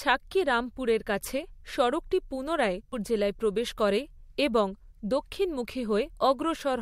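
At 2.92 s, right after "রামপুরের কাছে সড়কটি পুনরায়" and before "জেলায় প্রবেশ করে এবং", damaged data in the compressed stream produces a short blip. Corrupted bytes there make the decoder misread the frame and lose sync. It then hunts for the next valid frame header.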